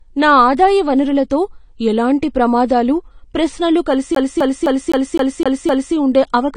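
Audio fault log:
throughout: AAC compression, likely the cause of the dull, smeared character of this speech. The top of the spectrum is missing, with nothing above 10 kHz, so sibilants sound muffled and carry a warbling fizz, and transients blur. A spectrogram would show a hard ceiling at 10 kHz and patchy, holed bands below it, where the encoder dropped or roughly quantised frequency lines. The damage is plainly audible and points to a low bitrate of around 32 kbps.
4.15 to 5.95 s: CD stuck on one turn. The same 257 ms snippet of audio plays seven times in a row, giving the fast, even stutter of a skipping disc. A scratch throws the laser back to the same spot on each rotation, so playback returns there again and again. On the waveform, identical blocks repeat at an even 257 ms spacing with a brief mute at each jump. On the spectrogram, the same short pattern appears as a row of vertical stripes.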